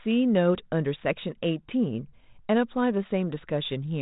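No technical faults can be heard in this speech, which carries only the light coarseness of 32 kbit/s G.726 ADPCM telephone coding and nothing above about 3.8 kHz.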